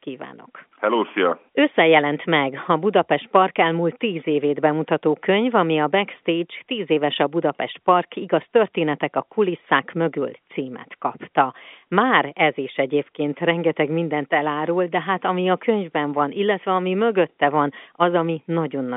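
The speech carries the narrow band of G.711 telephone coding, running from about 200 Hz to 3.6 kHz with nothing above 3.8 kHz, and the signal shows no fault anywhere.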